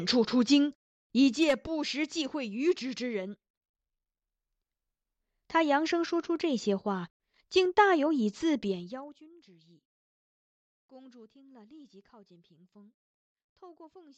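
A fast ticking rides on the speech from 1.2 to 1.52 s while the level falls by roughly 10 dB, then more coarsely from 8.6 to 9.28 s during a drop of around 25 dB. This zipper noise comes from gain moving in unsmoothed steps of about 1 dB, then about 2 dB, some thirty times a second, each leaving a click.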